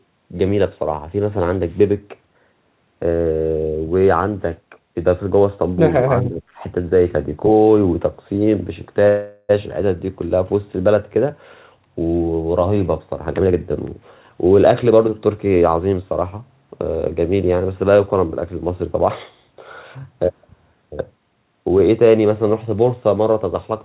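Speech suppressed in double talk, from 6.03 to 6.42 s: the voice dips by about 10 dB over roughly 0.3 s. The likely cause is an echo canceller that, with both sides talking at once, couldn't tell this talker from the loudspeaker echo and turned both down.

Call audio freeze, from 9.08 to 9.51 s: the speech stalls, and the last sound is stretched into a fading buzz for 410 ms without ever reaching silence. This is likely because delayed packets emptied the jitter buffer. When they arrive, the speech resumes where it stopped, so nothing is lost but everything after is 410 ms later.

Jitter buffer speed-up, from 13.27 to 16.78 s: the speech runs at about 111% speed while keeping its pitch, and sounds hurried. To shrink the backlog, the receiver repeatedly cut out short pitch-period slices, around 0.4 s in total. Throughout the clip, there is no content above 4 kHz, which fits a G.711 A-law call path at 64 kbps.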